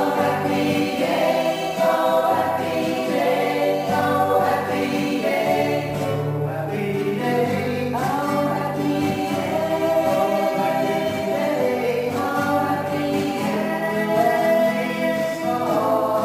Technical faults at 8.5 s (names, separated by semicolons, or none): crude rate conversion